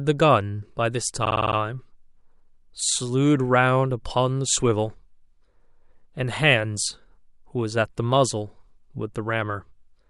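Speech, with repeated frames from 1.24 to 1.56 s: a 52.2 ms slice, consistent with a pair of compressed frames, plays six extra times, a stuttering loop that adds 0.31 s. On a spectrogram, identical blocks repeat side by side.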